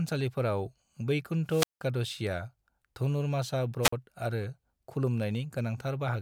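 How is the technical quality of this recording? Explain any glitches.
The recording has two wireless microphone squelch dropouts. From 1.47 to 1.84 s, hiss briefly swells and the speech then cuts to near silence for about 178 ms before returning. A shorter one at 3.82 to 3.93 s mutes for about 47 ms. In each case the analogue FM radio link weakened until the receiver's squelch shut the output off, leaving a gap in the speech until the signal recovered.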